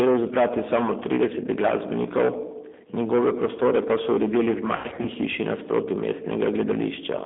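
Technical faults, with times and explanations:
Throughout: hard clipping. The speech was driven about 15 dB past what the chain could pass, so the peaks get sliced flat. That's a lot of overload, with something like a sixth of the samples sitting on the ceiling, so it isn't just the odd crackle on loud syllables. Every louder stretch picks up a harsh, gritty fuzz, because those squared-off tops pile extra harmonics high into the spectrum.
Throughout: G.729 codec. Sounds like an 8 kbit/s G.729-family VoIP path, with the audio squeezed into roughly a 200 Hz to 3.6 kHz phone band, so there's no air on top and little weight at the bottom. The codec damage is plainly audible. Speech gets rebuilt from a vocal tract model, a pitch predictor and a few pulses per frame, and that leaves it rough and a bit synthetic.
4.76 to 5.08 s: VoIP packet loss concealed by the speech codec. Just before "hiši nasproti", about 160 ms of packets drop out, scattered across roughly 280 ms, with the longest gap around 80 ms. 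The decoder covers each gap by carrying on from its last pitch and filter and fading the gain down. So instead of silence you get a smeared, buzzy stretch that dips. Since each frame builds on the previous one, things stay a bit weak and off until the decoder catches up.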